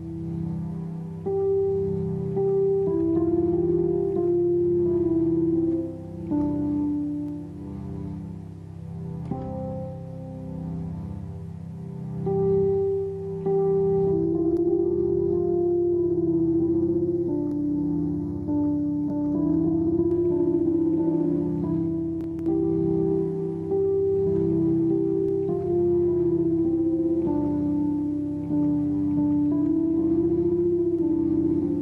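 Between 14.11 and 20.11 s the audio turns hollow and phasey from channel delay (comb filtering): one channel trails the other by a fraction of a millisecond before mono summing, cancelling energy from around 3 kHz upward at evenly spaced intervals. A spectrogram shows steady dark horizontal notch bands there.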